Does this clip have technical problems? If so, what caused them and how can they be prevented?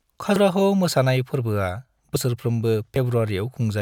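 Yes, the speech skips ahead at 0.36 s, just before "मोसानाय फोर्बोआ", at 2.16 s, just after "मोसानाय फोर्बोआ", and at 2.96 s, losing about a tenth of a second first, then shorter bits. That's likely a dropped buffer (overrun): the recorder didn't collect samples before the hardware overwrote them. Larger buffers and a less busy recording thread should prevent it.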